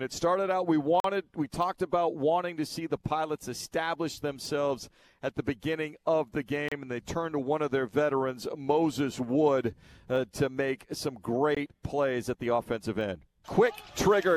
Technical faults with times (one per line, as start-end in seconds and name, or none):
1.00-1.04 Bluetooth stall
6.68-6.72 Bluetooth stall
11.55-11.57 Bluetooth stall